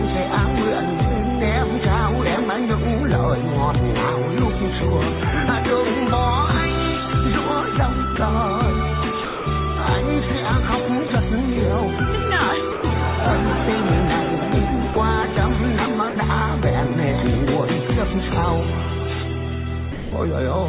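At 8.16–8.18, 9.24–9.46, 11.08–11.10, 12.72–12.84, 14.94–14.96, 16.10–16.16 and 19.92–20.12 s, the sound briefly gives way to steady hiss, likely sound dropped by the voice detector and filled with comfort noise, over the call path's 4 kHz band limit.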